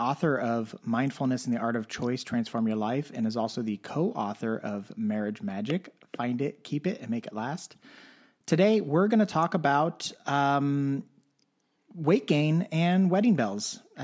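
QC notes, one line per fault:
No faults heard anywhere in the speech.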